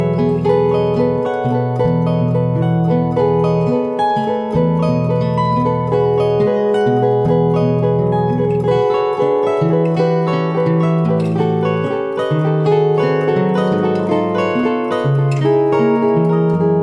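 No technical faults can be heard anywhere in the audio.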